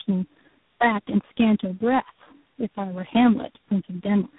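Speech, with tandem speech coding running through the whole clip. Nothing is heard above about 3.8 kHz, so it sounds muffled and narrowband. The sound is rough and warbly, more than a single codec would leave. That points to a chain of three speech coders, such as AMR-NB at 5.15 kbit/s, AMR-NB at 6.7 kbit/s, then G.726 at 24 kbit/s. Each coder re-encodes the damaged output of the last, so the errors pile up.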